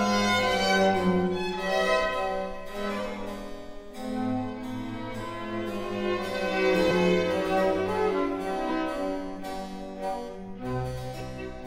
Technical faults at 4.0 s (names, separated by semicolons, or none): none